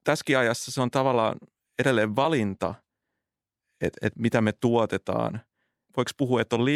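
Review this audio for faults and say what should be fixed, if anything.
Compressed frames skipped at 2.24 s. A single compressed frame, roughly 30 ms of audio, never reaches the output, either because it is missing from the file or because the decoder rejected it as damaged. The speech jumps forward by one frame length, and the 26.1 ms step fits a 1152-sample frame at 44.1 kHz. Because adjacent frames overlap, the gap sounds like a short smeared blip rather than a sharp click. To prevent it, verify file integrity after encoding and transfer, and re-encode or re-copy from the source if any frame fails its check.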